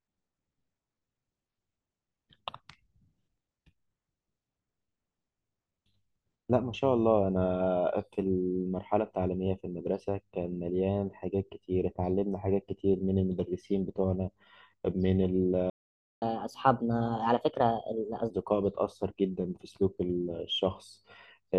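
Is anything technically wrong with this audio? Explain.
Yes, there are two related faults in this speech.

At 15.70 s a playback stall sets in. The player likely ran short of buffered data or had its thread held up. The speech cuts to silence for about half a second, 0.52 s, and resumes at 16.22 s.

From 16.22 s to 18.30 s comes catch-up at higher speed. The player resamples its backlog to recover the lost time, so the speech runs 1.25 times fast and the pitch rises by about four semitones, then both settle back to normal.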